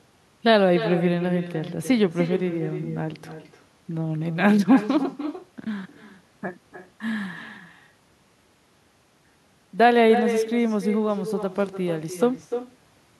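From the start of the speech to the end, every phrase returns as a distinct, quieter copy, about 10 dB down and arriving roughly a third of a second later. This is echo with no canceller: the far end's loudspeaker feeds its own microphone and the signal travels back across the network unremoved. The copy sounds thin. Unlike ordinary reverberation, which smears into a continuous tail, it arrives as a separate repeat after a clear gap.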